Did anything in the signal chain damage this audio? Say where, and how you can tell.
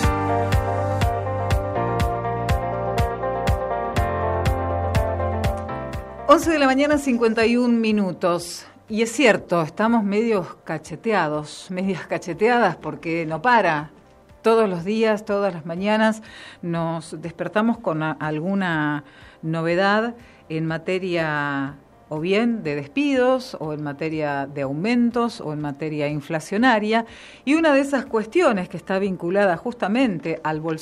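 No, nothing in the signal chain has left an audible mark on this audio, and every stage from capture through playback passes the signal without damage.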